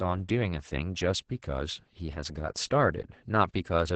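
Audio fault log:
Throughout: Opus voice compression. The speech is heavily damaged, cut off above about 8 kHz and sounding muffled, hoarse and faintly robotic. This fits SILK linear-prediction coding at a bitrate near 10 kbps, where the excitation driving each predicted spectral envelope is quantised coarsely.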